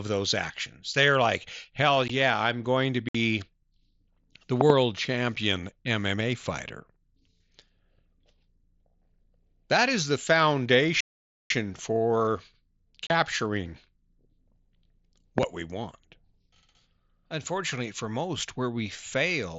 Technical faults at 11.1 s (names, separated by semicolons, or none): playback stall